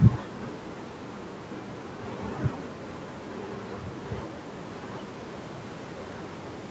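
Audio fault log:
Nothing stood out on listening to this speech clip; its top end stops around 8 kHz, as expected for a call path.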